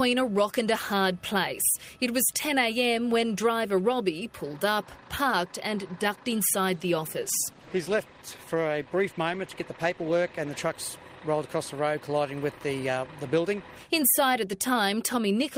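From 7.19 to 10.81 s the audio turns coarse and rough, staying at its poorest for about 3.5 s. This is a call bitrate drop: the encoder, working from a lowered bandwidth estimate, spent fewer bits, which fits a fall from 32 to 16 kbps before recovering.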